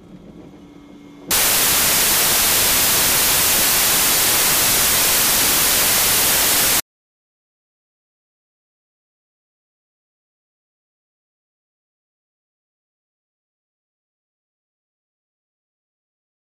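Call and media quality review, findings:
Sample decoding fault, samples built from the wrong bytes, 1.31 s to end. Probable component: PCM reader or format conversion. Byte offset, swapped byte order or wrong alignment puts rapidly varying low-order bits into the high-order position of each sample. Result: loud, harsh broadband noise replacing the audio.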